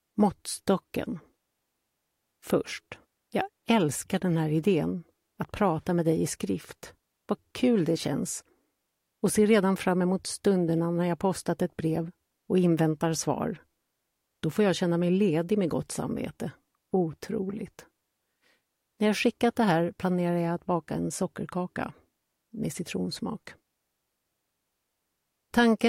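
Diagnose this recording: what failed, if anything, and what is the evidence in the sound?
Nothing in the recording points to a failure at any stage of the chain, so there is no fault to diagnose here.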